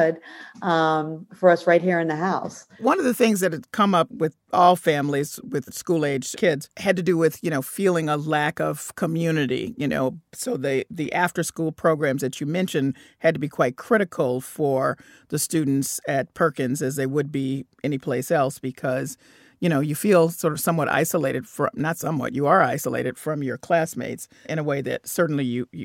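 No technical faults are audible.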